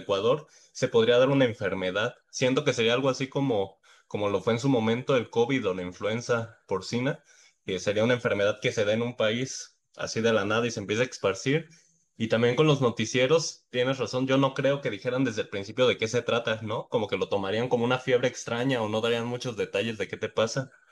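A speech recording, and near the end, from 18.58 to 20.08 s, there's crude rate conversion: a gritty, inharmonic fizz riding on the louder, brighter sounds, about 30 dB down. It's consistent with samples being dropped or repeated with no filtering, which fits a 48 kHz to 44.1 kHz conversion.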